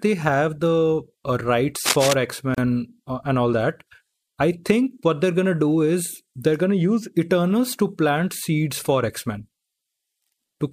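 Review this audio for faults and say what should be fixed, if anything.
From 1.85 to 2.14 s there is cable scratch noise. A burst of rough, uneven scratching and rustling sits over the speech. It is roughly as loud as the speech itself. The likely cause is a worn cable, connector or control being moved during recording. Its contact resistance jumps about rapidly, and that turns into dense noise bursts in the signal. To prevent it, replace or clean worn cables and connectors, and keep them still while recording.

From 2.55 to 2.58 s there is a gap at a join of encoded pieces. The speech breaks off for 34 ms, then carries on from where it left off. The edges are smeared by the codec. This happens when separately encoded pieces are joined without trimming. The encoder's start-up delay and the padded final frame both remain as silence. To prevent it, join the pieces before encoding, or trim the encoder delay and padding at each join.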